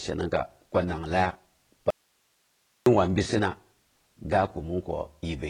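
From the start the speech sounds dull and smeared, with nothing above 9.7 kHz and a warbling, fizzy edge on sibilants. This is heavy AAC compression damage, likely from AAC-LC at a low bitrate that fits about 16 kbps, which discards high bands and coarsely quantises the rest.

At 1.90 s the speech cuts out abruptly and returns at 2.86 s, leaving about 0.96 s of faint hiss roughly 45 dB below the signal. This is an audio dropout to a faint residue, likely a loss of signal while the downstream path stayed live.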